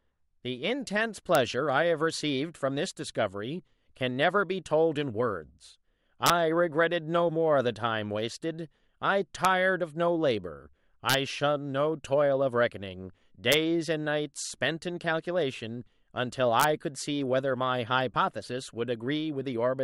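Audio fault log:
1.35, 6.26–6.30, 9.45, 11.10–11.14, 13.52–13.54 and 16.60–16.64 s: integer overflow, violent cracks on the loudest speech peaks, harsher than clipping, because samples up to about 3 dB over full scale wrap round to the opposite extreme instead of being held at the limit.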